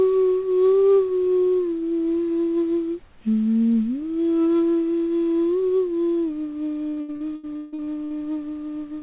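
This is a clip of everyday sounds that went through a narrowband call link, and nothing reaches above 4 kHz, which fits G.711 at 64 kbps. From 6.9 to 8.1 s there's repeated packet loss with a robotic sound. About a dozen holes, the longest 158 ms, get patched by stretching the previous audio. Close to half that stretch is filler, so it turns choppy and robotic.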